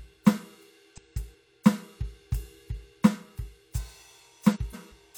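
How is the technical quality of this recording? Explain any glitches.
The music has two reordering glitches. Frames out of order at 0.94–1.35 s and 4.54–4.94 s: two adjacent runs of about 186 ms each, which fits four codec frames apiece, were decoded swapped. The music briefly garbles and flutters. Unlike a dropout or repeat, nothing is lost or duplicated, and the timing stays intact.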